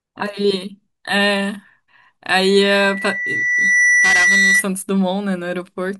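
At about 2.42 s a loudspeaker feedback squeal kicks in: a steady tone around 2 kHz that swells over something like a second and a half until it sits a few decibels above the speech, then hangs there until it cuts out at 4.66 s. What's happening is the mic is hearing the loudspeaker it feeds, and at 2 kHz the loop gain has crept past one, so that frequency keeps feeding itself and grows into a howl.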